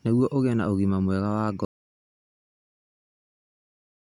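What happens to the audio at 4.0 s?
At 4.0 s the speech is gone: an audio dropout to silence runs from 1.65 s to the end, likely from the input being lost while zeros kept being written. No room tone remains. The waveform is a flat line and the spectrogram is blank.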